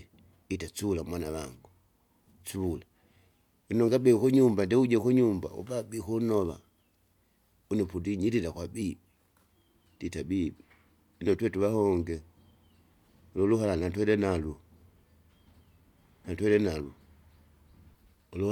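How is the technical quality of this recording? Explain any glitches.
Good news, there's nothing to flag here, since no glitches or technical problems turn up anywhere in the recording.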